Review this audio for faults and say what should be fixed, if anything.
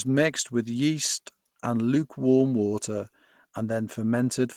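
The speech has plainly audible codec damage from start to finish. It sounds hoarse and muffled, with a rough, grainy texture on sustained sounds. The top end is still present, but it sounds filled in rather than detailed. The likely cause is Opus compression at a low bitrate, around 16 kbps. At that rate the encoder works in its hybrid speech mode and fills bands it cannot afford with folded or noisy content. To prevent it, encode from the original at a higher bitrate.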